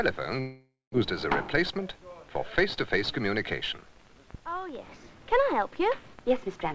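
From 0.40 to 0.96 s, a long network dropout, likely from lost packets, leaves the receiver extending the last sound as a fading buzz before silence, then resuming further on.

From 1.62 to 4.03 s, a jitter buffer speed-up trims about a tenth of a second in short pitch-period cuts, so the sound runs hurried at 105% while keeping its pitch.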